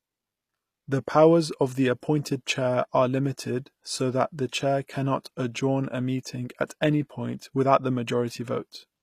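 Throughout the speech, the treble is bright but synthetic: sibilants come out gritty and lispy, with a metallic sheen that doesn't match the voiced sound beneath it. This points to HE-AAC compression, likely at a low bitrate around 24 kbps, where spectral band replication copies lower bands upward under a coarse envelope. On a spectrogram, the upper region shows repeated, smeared patches misaligned with the lower harmonics, and nothing at all above 14.9 kHz.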